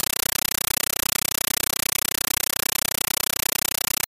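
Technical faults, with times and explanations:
throughout, compressed stream played as audio: undecoded AC-3 (Dolby Digital) data is played as samples, replacing the speech with loud chattering static. The waveform shows dense 9.33 ms noise blocks, 31.25 per second, separated by near-silent gaps where the zero padding falls. The spectrogram shows evenly spaced broadband vertical stripes.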